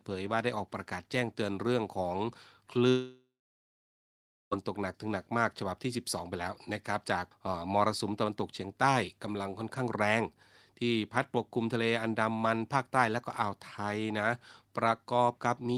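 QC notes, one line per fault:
2.89–4.54 s, long network dropout: speech trails into a fading buzz or hiss, then 1.25 s of near-silence, likely lost packets; the waveform shows a decaying tail, then a flat gap.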